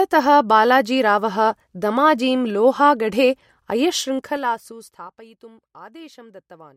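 From 3.93 to 5.21 s there's zipper noise: the speech gets pulled down around 20 dB in unsmoothed 3 dB jumps, about five a second, so each step clicks and you hear a ticking zip riding the level as it drops.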